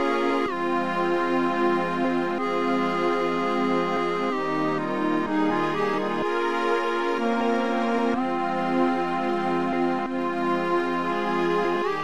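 Right near the end, at about 11.75 s, there's a case of compressed frames skipped. A short run of encoded frames never got played, whether it was missing from the file or the decoder rejected it as damaged, so the audio leaps forward by something like 150 ms. That fits roughly seven frames of 23.2 ms each.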